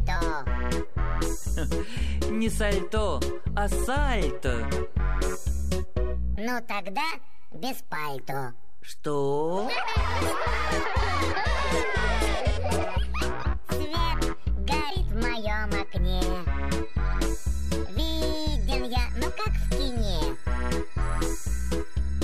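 DC offset runs throughout the clip: the whole waveform sits shifted away from zero by a constant of about -28 dBFS. It isn't audible as a sound, but it eats into headroom and shows as steady energy at the very bottom of the spectrum.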